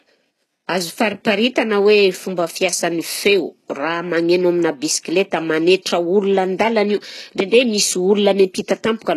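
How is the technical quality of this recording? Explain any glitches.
The recording has one fault, and it runs throughout: heavy HE-AAC compression. The likely cause is a low-bitrate HE-AAC encode, in the region of 16 kbps by the sound of it, that kept only the lower spectrum and rebuilt the treble by spectral band replication, copying lower bands upward under a coarse envelope. The damage is plainly audible. The speech keeps a synthetic brightness that stops dead at 12.3 kHz, and s sounds come out gritty and metallic because the rebuilt harmonics don't align with the real ones.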